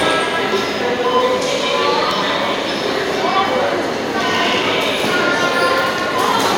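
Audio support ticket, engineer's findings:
Engineer's findings: no fault found in the audio.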